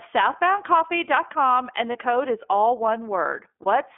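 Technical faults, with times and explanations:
Throughout, iLBC codec: the speech is confined to roughly 250 Hz to 3.4 kHz and sounds plainly rough and synthetic, fitting iLBC's 13.33 kbps mode coding each 30 ms frame's excitation independently. A spectrogram shows nothing above 3.4 kHz or below 250 Hz, with blurred harmonics.
1.92–1.96 s and 3.62–3.66 s, lost iLBC frames: a brief held, buzzy vowel-like sound, the first just before "code is all". The decoder repeated the last pitch cycle mixed with noise, a length fitting one lost 30 ms frame. The waveform shows near-identical repeating cycles, the spectrogram frozen harmonics, then immediate recovery.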